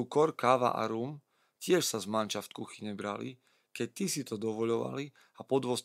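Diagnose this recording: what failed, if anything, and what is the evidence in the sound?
Nothing failed; no faults heard.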